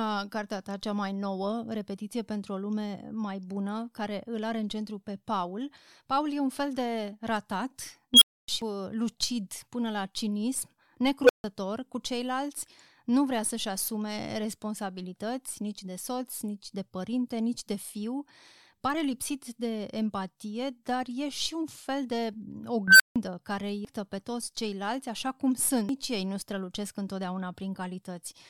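At 8.14 s an unstable filter takes over the speech. A recursive stage with runaway coefficients feeds its own output back, so a squeal near 3 kHz swells for 74 ms into clipping. The numbers then overflow and the audio drops to silence for 270 ms until the filter resets, ending at 8.48 s. On a waveform this is an envelope ballooning into clipping before a flat gap. On a spectrogram it is a bright horizontal line ending in a blank column.

At 8.62 s, damaged data in a compressed stream produces a brief glitch. Corrupted bytes make the decoder misread frames and hunt for the next valid header.

The same filter blowup recurs from 11.22 to 11.44 s as a lower whine around 500 Hz that builds over 75 ms, then a 150 ms dropout. It returns from 22.88 to 23.16 s around 1.5 kHz, building more slowly over 122 ms, with 160 ms of silence after.

Two more stream-corruption blips follow, at 23.85 s and 25.89 s. 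Each is a momentary glitch where the decoder loses sync.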